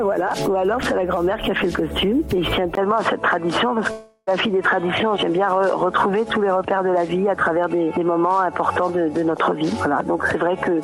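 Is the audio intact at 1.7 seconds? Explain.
Yes, the audio at 1.7 seconds is intact, with no dropout, click, distortion or other fault at that moment.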